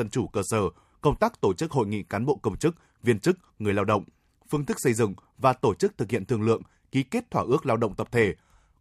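No dropouts, clicks, distortion or level jumps turn up anywhere in the recording.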